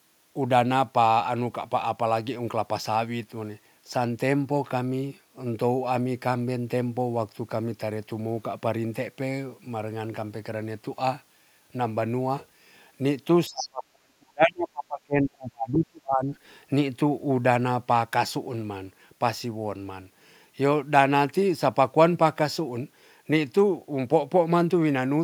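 From 13.48 to 16.33 s, the echo canceller likely failed to tell the talker apart from the far side playing over the loudspeaker, so it pulled down everything it picked up. This speech suppressed in double talk takes about three seconds of the talker's voice. The speech sinks, and at its deepest the drop reaches roughly 40 dB, close to silence.

Within that stretch, from 13.57 to 13.68 s, the other side's voice leaking through is heard as a short scrap. The loudspeaker sound likely reached the microphone and was not fully cancelled. The residue sits well below the talker's level, around 15 dB down, and comes across as a brief fragment of a second voice.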